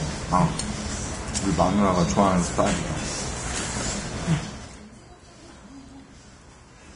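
From start to finish, the audio is hissy and grainy. The treble stops abruptly, with nothing above 10.5 kHz. Tones sound rough, and sharp onsets are smeared. The likely cause is heavy Vorbis compression. At a low bitrate, around 30 kbps, the encoder lowers its cut-off. It also quantises the upper residue so coarsely that fine detail turns into noise of similar energy.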